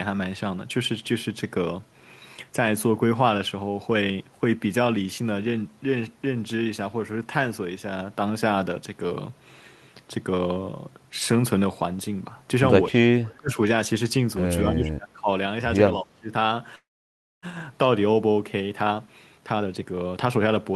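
From 12.9 to 13.59 s, again from 14.71 to 15.29 s, and briefly from 16.01 to 16.31 s, the echo canceller likely could not tell the near talker apart from loudspeaker echo while both sides spoke at once, so it turned everything down. This is speech suppressed in double talk. The speech dips sharply, by about 35 dB at its deepest in the first stretch and about 25 dB in the later two. Roughly half a second of each of the first two spans is pulled down, leaving the speech sounding chopped and thinned.

At 16.75 s the incoming packets were likely held up long enough to drain the jitter buffer, producing a call audio freeze that lasts until 17.46 s. The receiver bridges about 671 ms. A brief decaying continuation of the last sound gives way to roughly 610 ms of silence. Nothing is lost, because the speech resumes exactly where it stopped. The whole gap is added delay, 671 ms of it.

From 18.81 s to the end of the clip, the receiver works through the built-up backlog with a jitter buffer speed-up. 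It repeatedly cuts out short pitch-period-sized slices, about half a second in total. The speech plays at roughly 124% of its normal rate while its pitch stays the same, so it comes across as rushed and compressed rather than higher.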